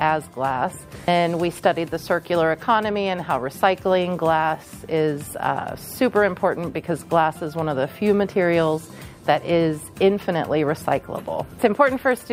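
No technical faults are audible anywhere in the audio.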